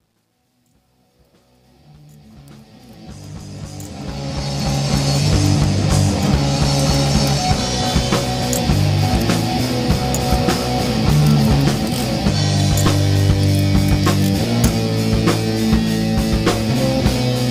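From the start to 5.10 s the clip fades in, and that fade carries truncation distortion. The gain stage keeps too few bits and adds no dither, which fits roughly an 11-bit path, so low-level samples collapse onto a handful of coarse steps. The worst stretch runs from 0.0 to 2.76 s, where the quietest audio turns gritty. After that, the distortion continues more mildly up to 5.1 s.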